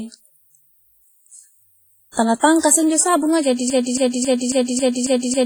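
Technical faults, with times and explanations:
Throughout: WMA compression, or something very like it. The speech has a washy, ringing quality, with a hiss that swells and fades along with the speech. That's the transform codec spreading its quantisation noise over long blocks, tens of milliseconds at a time, and dropping the weaker spectral detail altogether. The damage is heavy, which likely points to a low bitrate, somewhere around 24 kbps. Nothing comes through above 21 kHz, so the top end is capped too.
3.70 s to the end: broken-record loop. From here the audio stops moving forward and a fragment of about 273 ms repeats back to back, identical each time, six times over until the clip ends. That likely means the player, encoder or stream stalled and kept re-sending the last chunk it had buffered, so whatever speech should have filled those last seconds is simply gone.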